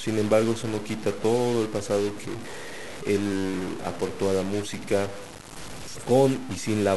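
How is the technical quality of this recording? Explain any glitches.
The recording has one fault running through the whole speech clip: a stuck bit. One data bit in the signal path is likely held at a fixed value, perhaps by a broken line or a faulty converter. About half of all samples come out wrong by that bit's weight, a step of about -35 dBFS. The speech picks up a harsh, buzzy distortion. Because the error flips with the sign of small values, the pauses fill with an audible noise floor rather than silence.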